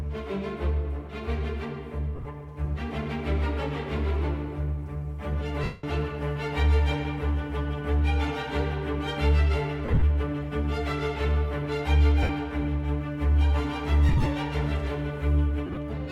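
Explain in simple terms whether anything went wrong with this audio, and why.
Lost LE Audio frames interrupt the sound at 2.16, 5.64, 9.85, 12.23, 14.09 and 15.66 s. The receiver fills each gap by repeating recent sound with its detail scrambled, so you hear a brief hissy smear rather than a clean silent dropout. The longest, at 5.64 s, fades away over about 0.2 s.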